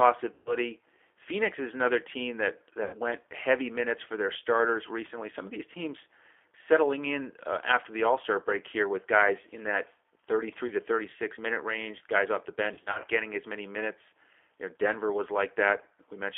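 Throughout the 16 s of speech, the G.729 codec shapes the sound. Its 8 kbit/s analysis-by-synthesis coding rebuilds each 10 ms frame from a vocal tract filter, a pitch predictor and sparse pulses, and the result carries a rough, slightly synthetic grain. The line band runs from 300 Hz to 3.5 kHz, so the sound is thin and boxy, with nothing above that edge.

Packet loss concealed by the speech codec first appears from 0.34 to 0.56 s. About 120 ms of audio is missing, which fits four 30 ms packets. The decoder repeats its last pitch and filter at falling gain, so the sound smears into a buzzy tone or coloured noise that fades, and stays weak for a while after real audio resumes. The same happens from 2.84 to 2.97 s, between "is another team that" and "went heavy minutes for", where about 90 ms is lost. A brief 30 ms gap at 10.67 to 10.73 s is concealed the same way. From 12.74 to 13.06 s, between "range guys off the" and "getting as many minutes", 120 ms of losses is spread over 300 ms, with no run longer than 30 ms. 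This produces a series of short concealed gaps rather than a single dropout.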